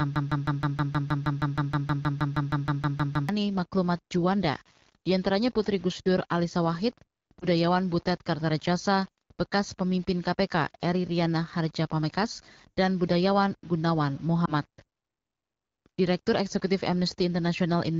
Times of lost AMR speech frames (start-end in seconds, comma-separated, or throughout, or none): 7.40-7.45, 14.45-14.52